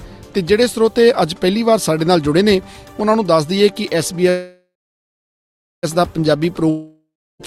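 A short audio clip has a call audio freeze from 4.29 to 5.85 s, likely packets stalled in transit. The last sound fades into roughly a second of silence, then resumes exactly where it stopped, nothing lost but about 1.5 s late. A long network dropout follows from 6.70 to 7.41 s: the sound fades out and then returns further on, skipping about 0.7 s, likely because that stretch never arrived.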